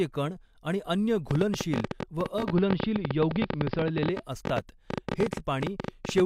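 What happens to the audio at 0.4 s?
Nothing goes wrong at 0.4 s: the speech runs through that moment intact, with no dropout, click or distortion.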